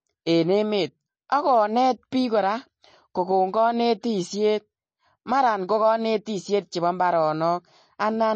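Throughout the clip the speech has likely passed through MP3 compression at a low bitrate, with the damage plainly audible in a way that fits roughly 32 kbps. Starved of bits, the encoder has discarded weak frequency lines that then drop in and out from frame to frame, and it has removed everything above about 8.3 kHz. The result is a watery, swirling texture, metallic chirping on s sounds, smeared consonant onsets, and a dull top end.

At 6.25 s there is pre-echo lasting about 14 ms. A sharp attack landed late in a transform block, so the quantisation noise sized for that loud onset was spread back across the quiet moment just before it. This is heard as a brief hiss leading into the attack, which itself sounds softened and smeared rather than crisp.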